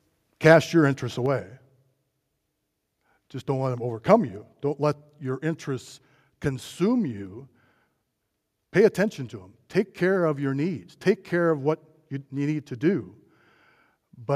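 From 0.46 to 0.53 s the loudest part of the speech picks up a harsh, crackling edge, likely microphone overload: input gain set about 2 dB too high, so a small fraction of the peaks were flattened at the converter's limit. Unlike codec distortion, the roughness appears only on those peaks.

At 1.26 s the speech and the background noise beneath it drop together by about 5 dB in a single abrupt step, likely the microphone volume stepped down by the call software reacting to that overload. Because both fall at once and stay down, this is a gain change rather than a quieter delivery.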